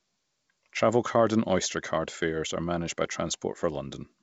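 No technical faults can be heard in this speech, which comes through G.722 wideband telephone coding at 64 kbit/s.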